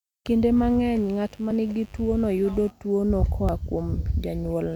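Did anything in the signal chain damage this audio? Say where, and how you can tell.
Yes. Mains buzz runs from 0.57 s to 2.71 s, entering at the analogue wiring stage. A steady, raspy buzz sits about 30 dB below the speech, built on a 50 Hz fundamental with a ladder of harmonics reaching into the kHz range. That sharp, gritty edge comes from switching spikes, two in each mains cycle, from a dimmer, rectifier or poorly shielded cable coupling into the line before conversion.

Audio missing between chunks shows up as skips at 1.51 s and 3.49 s, about 2 s apart, each dropping around 20 ms of speech with the two sides spliced straight together and no gap of silence. The regular spacing points to the driver or buffer stage, most likely a recorder or processor handling audio in 2-second blocks and losing a sliver each time it hands off from one block to the next.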